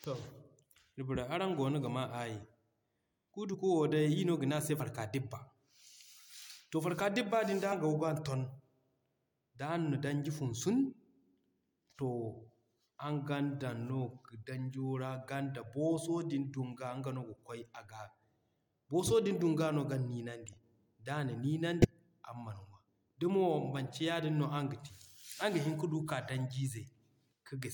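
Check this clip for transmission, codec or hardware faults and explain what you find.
Two kinds of codec fault can be heard in this speech: four skips of compressed frames and one stretch of corrupt frames that were decoded anyway.

Compressed frames skipped at 3.51 to 3.55 s, 4.76 to 4.80 s, 7.71 s and 21.81 to 21.85 s. The decoder never played these frames, either because they were missing or because it rejected them as damaged, so the speech jumps forward by a short stretch of audio. Each jump is about a few tens of milliseconds at the first two points, somewhat longer at 7.71 s and roughly a tenth of a second at 21.81 s. A spectrogram shows a thin vertical seam where the harmonics shift abruptly.

Corrupt frame decoded from 20.46 to 20.54 s. Flipped bits reached the decoder, which played the frames regardless. The misread gains and codes put energy at the wrong frequencies for a handful of frames, and the result is a short burst of wrong sound peaking at about -35 dBFS. 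A spectrogram shows this as a blocky patch of stray energy that does not line up with the speech harmonics. The waveform has a small, irregular bump.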